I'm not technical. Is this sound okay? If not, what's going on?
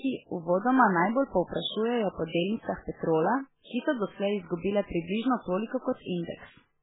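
No. MP3 compression runs from start to finish and is the likely cause of what you hear. The speech sounds dull and muffled because nothing above 3.8 kHz survives, so the crisp hiss of s and t sounds is gone. The damage is heavy, and the audio also sounds watery and swirly. Squeezed for space, the encoder keeps dropping the quieter parts of the sound and bringing them back moment to moment, which makes everything warble.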